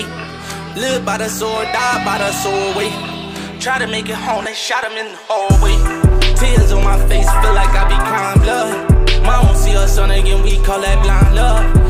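From 0.82 s to about 10.8 s there's a tick every 2 s, roughly seven in all: periodic USB or driver dropouts. Something blocks the bus or driver on a fixed cycle, so around a millisecond of audio drops to silence each time, heard as small regular clicks.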